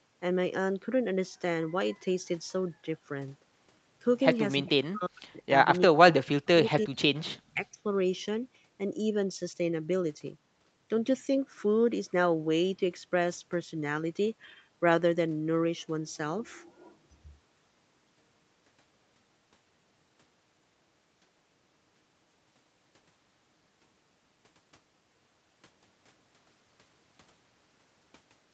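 Speech in which the talker drops away in bursts at 4.61–5.42, 5.87–5.98, 6.22–6.43, 6.63–6.99 and 7.53–7.78 s, by about 40 dB and less deeply in the last. This is likely speech suppressed in double talk. Unlike packet-loss dropouts, these are ducked stretches lasting tenths of a second, with no clicks or robotic concealment sound.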